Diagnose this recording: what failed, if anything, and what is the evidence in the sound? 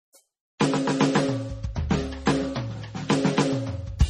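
Codec stage. The music sounds watery and swirly throughout, with nothing above 14 kHz. This is likely MP3 compression, consistent with a very low 32 kbps bitrate.

Codec stage again. Pre-echo appears at 0.58 to 0.61 s, about 24 ms, and at 2.26 s. Block-spread quantisation noise hisses before each attack, softening it.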